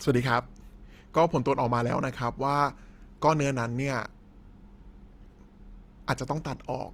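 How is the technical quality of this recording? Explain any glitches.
The quality's noticeably compromised. Throughout the speech there's a grainy, rough texture, likely Opus compression at a low bitrate around 24 kbps, with thin bands filled by folding or noise.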